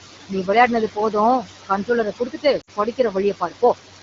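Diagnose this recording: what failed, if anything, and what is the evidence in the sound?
Call processing stage: noise suppressor artifacts throughout. The room noise sits about 7 dB below the speech. The suppressor pulls it down by about 15 dB between words, and it rises back under them.

Call processing stage again: speech cut by the noise suppressor, from 2.12 to 3.16 s and from 3.4 to 3.75 s. The suppressor mistook parts of the speech for noise. Drops reach about 18 dB, then about 14 dB. Roughly 300 ms and 100 ms sound swallowed and faint.

Network stage: lost AMR speech frames from 2.61 to 2.70 s. The gap lasts 60 ms, which fits three lost 20 ms frames. The decoder repeated the last pitch and vocal tract settings with falling gain. The sound drops to near silence within two frames, then returns briefly rough.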